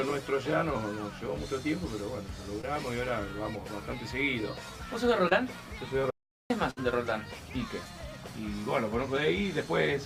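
At 2.61 s and again at 5.29 s there is short concealed packet loss: about 20 ms of signal failed to arrive in time each time, and the decoder covered the hole by extending the preceding sound for roughly 15 to 18 ms before crossfading back. Each one comes across as a brief smear or wobble rather than a gap. A spectrogram shows a thin slice where the harmonics or noise texture freeze briefly and lose their fine detail, with no break in the waveform envelope.

From 6.10 s to 6.50 s the audio drops out to silence for about 400 ms. The sound stops abruptly mid-flow and resumes just as suddenly, and nothing at all is heard in between, not even background noise, so whatever happened in that stretch is lost. The likely cause is the input briefly disconnecting or muting while recording continued. On the waveform this is a flat line. On the spectrogram it is a fully empty vertical band with hard edges on both sides.

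Shortly after, at 6.71 to 6.79 s, a burst of packet loss removes about 60 ms. The receiver repeated the last sound and let it fade, giving a brief buzzy or hissy tail before the audio picks up further along. The spectrogram shows smeared, flattened partials that dim across the gap, and the waveform tapers in amplitude before the real signal returns.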